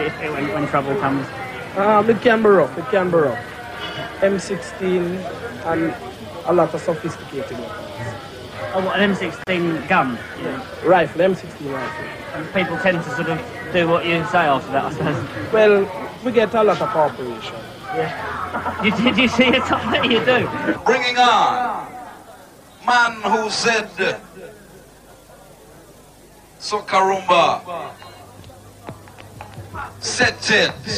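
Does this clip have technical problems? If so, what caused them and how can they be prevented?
Yes. At 9.44 s the sound drops out for about 32 ms, resuming at 9.47 s exactly where it left off, with its edges smeared by the codec. This is a gap at a join of encoded pieces: two sections were encoded separately and butted together, so the first piece's padded final frame and the second's encoder start-up delay both remained as silence. Trimming encoder delay and padding, or encoding the material as one continuous stream, prevents it.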